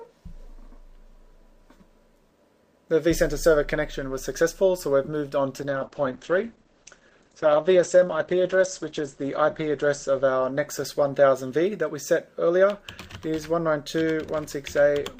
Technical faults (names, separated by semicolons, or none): call bitrate drop